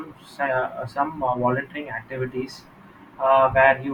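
No technical faults are audible.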